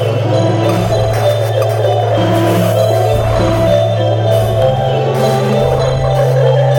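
A stage in the signal chain overloads throughout this music clip. It is driven about 4 dB past its limit, causing hard clipping on roughly one percent of samples, so peaks flatten into brief harsh crackle.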